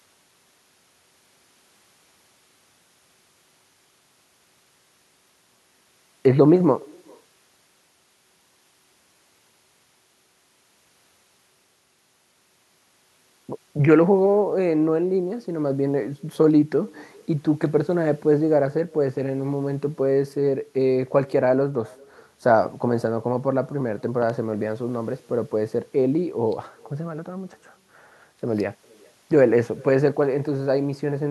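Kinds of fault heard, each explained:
Echo with no canceller: the far end's loudspeaker feeds its microphone unchecked, so the speech returns about 400 ms later as a faint copy, about 28 dB down.
Loud pop: likely a voltage step from a plug, switch or static, heard as two sharp pops at 24.22 s, peaking a little above the speech, which continues underneath.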